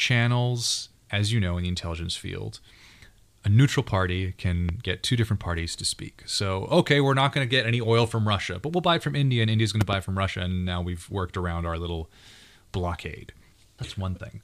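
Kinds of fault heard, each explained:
Loud pop: a sudden voltage spike, likely from a switch or plug. One pop at 4.69 s, then a louder double pop at 9.81 s.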